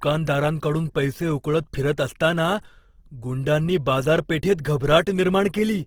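Throughout the speech, the sound is rough and grainy, with tonal parts of the voice turning noisy rather than clean. That points to likely Opus compression in its music (CELT) mode at a low rate, around 16 kbps, where band energies are kept but their fine detail is filled with folded or noise content. Unlike MP3 damage, there is less swirling or warbling from empty bands, and the top end stays open to about 20.3 kHz instead of sounding muffled.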